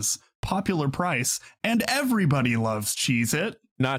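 No technical faults are audible.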